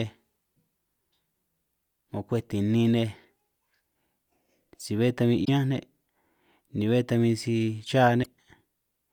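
A speech clip with two brief glitches, at 5.44 to 5.49 s just after "si bé tan bin" and at 8.22 to 8.26 s, both from damaged data in a compressed stream: corrupted bytes made the decoder misread frames and resynchronise.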